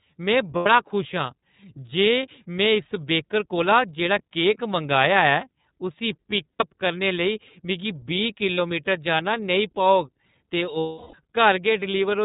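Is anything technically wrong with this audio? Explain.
Yes. The speech has passed through the iLBC codec throughout, and it has four short dropouts from lost iLBC frames.

The iLBC codec damage is plainly audible across the whole clip. This narrowband coder keeps nothing above 4 kHz, so the speech sounds muffled and slightly rough and synthetic. The quality points to the 13.33 kbps mode with 30 ms frames. On a spectrogram everything above 4 kHz is empty, a hard ceiling with no energy reaching above it.

Lost iLBC frames occur at 0.56–0.67 s, just before "खुश आं"; at 6.52–6.67 s, just before "करने लेई मिगी"; at 8.55–8.59 s; and at 10.80–11.14 s. The losses span about 90 ms, 90 ms, 30 ms and 330 ms of audio. In each gap the decoder repeats the last pitch cycle mixed with noise, so the speech turns into a held, buzzy or breathy vowel. The longest gap fades as it goes on. Because each frame decodes independently, clean speech resumes almost immediately after each gap. 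On a spectrogram each gap appears as flat, unchanging harmonic bands. The waveform shows one cycle copied over and over, visibly decaying in the 330 ms gap.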